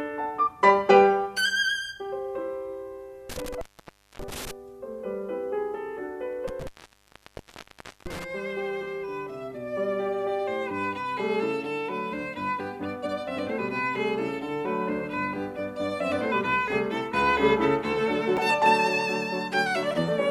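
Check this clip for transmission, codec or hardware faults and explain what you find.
Three faults affect this music recording: two dropouts from a loose connection and one brief codec glitch.

Between 3.30 and 4.51 s, and again from 6.48 to 8.24 s, the music cuts out with crackle at each edge for about 0.58 s and 1.39 s. This is intermittent contact: a plug or cable momentarily opening the signal path.

At 18.37 s a brief glitch comes from damaged data in a compressed stream, which forced the decoder to lose sync and hunt for the next valid frame.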